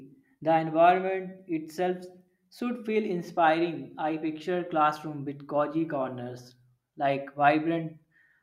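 No audible faults in this speech.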